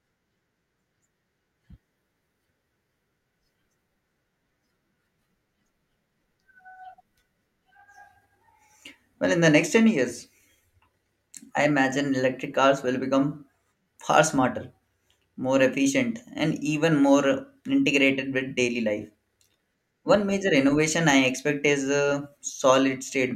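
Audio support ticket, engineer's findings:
Nothing stood out on listening to the speech recording, so there is no symptom, time or component to log.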